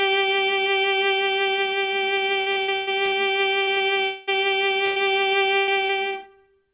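From 2.40 to 3.14 s, repeated packet loss (robotic sound) hits the music: six gaps, the longest 110 ms, left the receiver patching about 43% of the stretch by extending the last sound, so it turns choppy with pieces missing. It plays through a call path that carries nothing above 4 kHz.

Three short concealed packet losses follow at 3.64 to 3.69 s, 3.75 to 3.79 s and 3.79 to 3.82 s. Each hole of 20 to 40 ms was filled from the preceding sound and blended back, heard as brief smears or wobbles.

From 4.04 to 4.29 s the music is replaced by about 0.23 s of continued, fading buzz or hiss before the real audio returns without the lost part. It never drops to silence. The likely cause is a long network dropout.

Repeated packet loss returns from 4.85 to 5.91 s. Four gaps, the longest 104 ms, leave about 22% concealed, giving intermittent choppy, broken-up passages.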